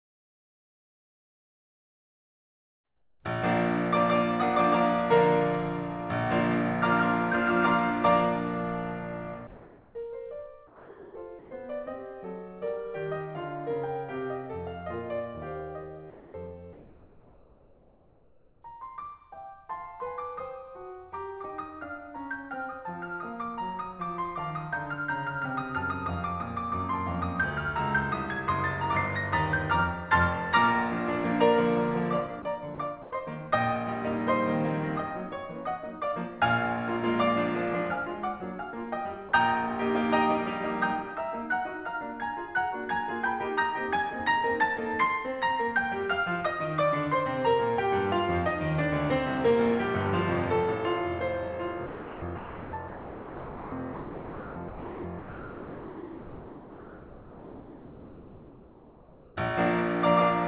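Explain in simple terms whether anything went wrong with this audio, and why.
The call's voice detector, likely mistaking quiet passages for silence, stopped sending, so comfort noise in place of the background took over: a steady, featureless hiss replaced the real background at 9.47–9.95 s, 10.67–11.51 s and 16.1–18.62 s.

Sound dropped by the voice detector happened likely where it wrongly treated the music as background, so the music itself briefly vanished into that hiss at 10.67–11.15 s and 39.29–39.32 s.

Sound chopped by the voice detector occurred likely where it kept switching on and off, so the music stutters at 32.42–33.11 s and through 51.86–59.36 s. Everything passes through a phone-style codec that cuts all sound above 4 kHz.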